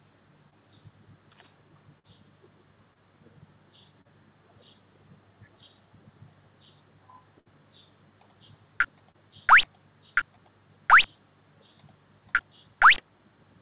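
Short concealed packet loss occurs at 0.50, 1.99, 2.94 and 4.01 s. Between 20 and 40 ms of audio arrived too late, and the receiver filled each gap by extending the preceding sound. The result is a brief smear or wobble; the repair at 4.01 s stretches the sound by about 10 ms. On a spectrogram, each appears as a short patch of copied, blurred sound.

A burst of packet loss runs from 7.40 to 7.48 s. About 60 ms went missing in a row, and the concealment held the last sound as a fading buzz or hiss before the audio resumed further on. In the waveform, this shows as a decaying, repetitive stretch followed by an abrupt jump.

Another short concealed packet loss at 9.12 s leaves a similar brief smear. Throughout the clip, nothing appears above 4 kHz, which fits a G.711 A-law call path.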